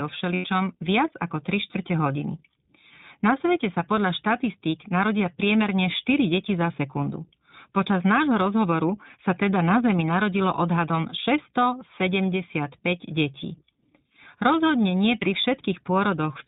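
The whole clip is narrowband speech through the iLBC codec. Nothing above 4 kHz survives. The voice is clear but slightly rough and synthetic. The damage is plainly audible, and the texture fits the 15.2 kbps mode with 20 ms frames.

From 0.34 to 0.46 s, lost iLBC frames leave about 100 ms missing. The decoder repeats the last pitch cycle with added noise, so the gap sounds like a held, buzzy vowel. At 15.20 to 15.23 s a shorter loss of about one frame does the same.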